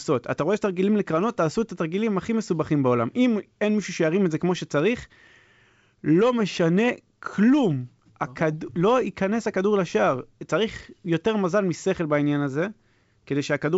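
The speech carries no technical faults, coming across as G.722 wideband telephone coding at 64 kbit/s with its content reaching up to 7.7 kHz and nothing above that.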